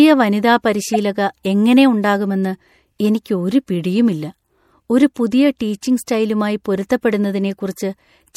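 Throughout the speech, the treble sounds cut off above a fixed point, with a watery, swirling texture and metallic chirps on s sounds. This is likely MP3 compression at a low bitrate, consistent with about 64 kbps. The encoder drops high frequencies and weak spectral lines that flicker between frames.

From 0.93 to 0.96 s, then from 5.99 to 6.03 s, a corrupt frame decoded produces a brief blip. Damaged bits misplace energy in frequency across two to three frames. The first burst is loud, peaking around -5 dBFS, and the second is noticeably quieter.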